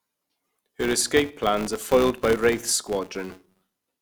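A steady buzz near 188 Hz runs through the whole speech clip, following its loudness: a filter restarted on every block, likely 256-sample blocks, transient at each start.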